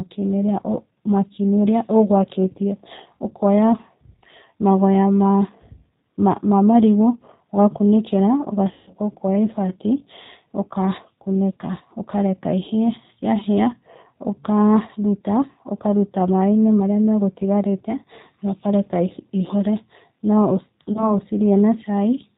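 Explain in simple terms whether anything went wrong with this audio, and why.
Throughout, the speech has been through the G.729 codec, a low-rate phone-call format that doesn't store the sound itself. It rebuilds each short slice of speech from a simple model of the throat and mouth plus a few pulses. Anything above 4 kHz is lost, so the speech sounds muffled, slightly rough and synthetic. Here that damage is plainly audible, though everything stays easy to follow.

There are also two moments of VoIP packet loss concealed by the speech codec. From 8.73 to 8.91 s, about 140 ms of data never arrived. The decoder filled the gap by repeating its last guess of the speech and lowering the volume step by step, which stretches it into a fading tone or noise. From 20.93 to 21.14 s a shorter gap, about 20 ms, does the same on a smaller scale. In both cases the speech stays briefly weak afterwards while the decoder recovers.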